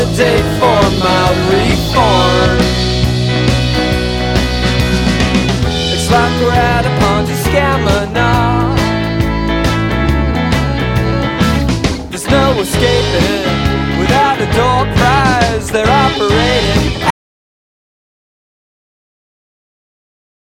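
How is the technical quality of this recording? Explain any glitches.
The recording has one clear glitch. From 17.10 s to the end, an audio dropout to silence: the input was likely lost while writing continued, leaving silence with no room tone, a flat waveform line, and a blank spectrogram.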